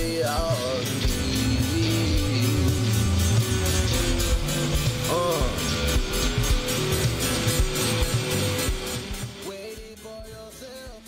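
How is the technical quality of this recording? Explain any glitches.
There's one glitch, a stretch of zipper noise from 8.39 to 9.92 s. The level drops by about 15 dB there, but in audible 1 dB steps, roughly ten a second, with no smoothing between them. Each jump leaves a tiny click, so you hear a fine ticking zip riding on the sound as it fades.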